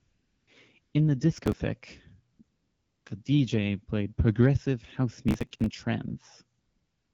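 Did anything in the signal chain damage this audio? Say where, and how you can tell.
Yes. AMR comfort noise appears at 0.00–0.47 s, 0.81–0.93 s, 2.33–2.39 s, 2.43–3.05 s and 6.59–7.13 s, a call-processing stage. The phone's voice activity detection stopped sending speech frames, so the receiver substituted a smooth, steady synthetic hiss for the real background, switching abruptly in and out.

Processor overload crackle occurs at 1.37–1.56 s and 5.29–5.70 s, at the driver or buffer stage. Bursts of gritty tearing come from many consecutive missed deadlines, each skipping a short slice of audio, which fits buffers of about 10 ms. The second, longer burst drops roughly twice as many.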